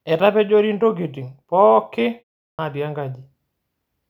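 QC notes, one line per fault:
2.53–2.59 s, clipped start after a pause: after a 0.38 s gap, the first 58 ms of speech gets swallowed, so the word jumps in without its opening sound. The output went to sleep during the silence and took that long to wake.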